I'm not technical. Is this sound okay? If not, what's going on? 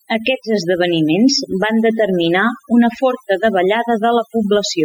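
No. Throughout the speech you can hear overdone noise removal: a cleanup tool set too strong has scooped out the background and quiet parts of the voice, leaving a lowered background that breaks up into twinkling specks. Unlike a gate cutting whole pauses, it works band by band.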